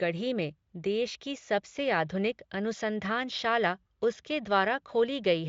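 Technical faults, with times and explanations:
No technical faults are audible in this speech.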